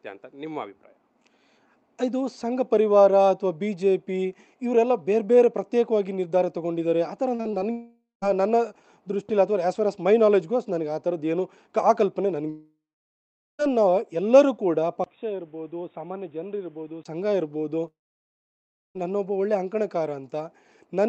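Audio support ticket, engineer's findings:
Choppy, metallic stretch at 7.35–7.62 s: repeated packet loss (robotic sound). Four short holes, longest 40 ms, each filled by stretching the last sound, so about 39% of the span is synthetic. Unlike a dropout, real audio keeps returning between gaps.

Long network dropouts at 7.72–8.24 s, 12.50–13.64 s and 17.88–19.00 s. Buzzy continuation fades to silence lasting about 0.16, 0.79 and 1.0 s, then sound resumes with the gap content missing. One continuous hole, not rapid stutter. Likely jitter-buffer starvation.

Dull, boxy sound at 15.04–17.05 s, entered through a 20 ms silence: likely input switched to a poorer device. Nothing above 3.8 kHz, a few dB quieter, new noise floor well below signal. Differs from codec limiting: the Opus call path reaches 8 kHz elsewhere, and the tone clears at 17.05 s.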